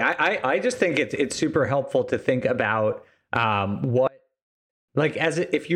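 At 4.08 s, just after "to think about um", the speech collapses for about 0.8 s, to 4.88 s. The level drops by about 30 dB and leaves only a faint residue. The likely cause is one channel inverted: with one stereo side's polarity reversed, the centred voice cancels when the channels are summed to mono. On a waveform the envelope shrinks to a sliver, and a spectrogram shows the energy almost vanishing.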